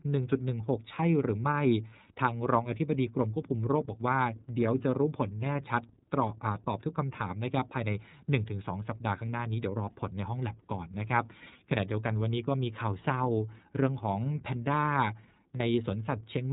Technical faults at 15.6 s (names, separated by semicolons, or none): iLBC codec; lost iLBC frames